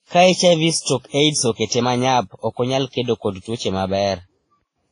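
Speech that carries transcoding artefacts from start to finish: the sound has the smeared, swirly quality of a low-bitrate codec with a second set of coding artefacts layered over it. It is likely the result of passing through several lossy codecs in turn, with a low-bitrate WMA stage first. On a spectrogram, energy stops at a hard ceiling near 10.1 kHz, set by the earliest, lowest-rate stage, with patchy, blocky holes below it. The waveform itself looks ordinary.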